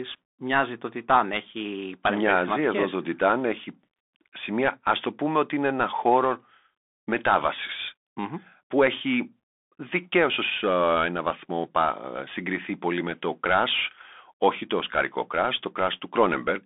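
From start to finish the speech runs through a Bluetooth CVSD headset codec. The line band sits at roughly 250 Hz to 3.6 kHz, with nothing above 3.8 kHz. The codec sends one up-or-down bit per sample, which fits a 64 kbps stream, and its adaptive step cannot keep up with sharp, loud transients. That leaves a grainy hiss under the speech and scratchy s sounds. That granular slope distortion is what separates it from a clean telephone-band filter, which narrows the sound without roughening it.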